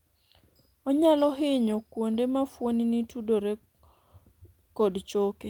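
Speech recording with no audible technical faults.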